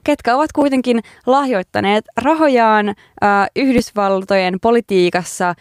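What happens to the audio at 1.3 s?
Nothing goes wrong at 1.3 s: the speech runs through that moment intact, with no dropout, click, distortion or other fault.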